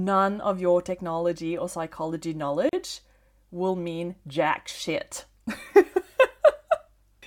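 A gap at a join of encoded pieces opens from 2.69 to 2.73 s, right after "your technology or psychology". The speech was encoded in separate pieces and joined without trimming, so the first piece's padded final frame and the next piece's startup delay both remain, leaving about 38 ms of silence in continuous speech. It sounds like a brief dropout with smeared edges, and the speech resumes exactly where it broke off.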